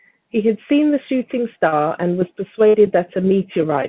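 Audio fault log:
1.68–1.74 s, short concealed packet loss: about 40 ms of the call failed to reach the decoder in time. The receiver filled the hole by extending the last stretch of sound, copying its pitch where it was voiced and using shaped noise where it was not, then blended back into the real signal. What comes out is a brief smear or wobble.
2.68–2.76 s, burst of packet loss: about 60 ms of audio was lost in a run or arrived too late to be played. The receiver carried the last sound forward and lowered it as the gap went on, so a voiced stretch becomes a held buzz and anything else becomes a fading hiss. The audio then resumes further along, with the stretch in between missing, on a call path that carries nothing above 4 kHz.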